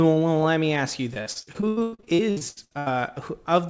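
Right after "let me ask you", from 1.14 to 2.88 s, repeated packet loss gives a choppy, robotic texture. A rapid run of gaps, the longest 98 ms, is patched by extending prior sound, covering about 46% of the stretch, all band-limited below 8 kHz, consistent with a G.722 call path.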